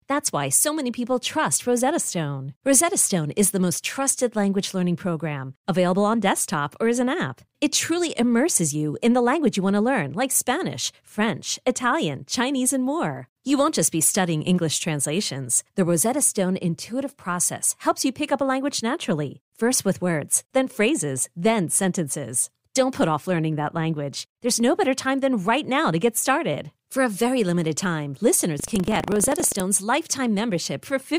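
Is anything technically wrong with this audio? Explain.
Yes. From 28.56 to 29.62 s, just after "a very limited time", buffer tearing: writer and reader pointers cross each period, splicing in a small slice of audio about a tenth of a second old, heard as a 25 Hz robotic rattle.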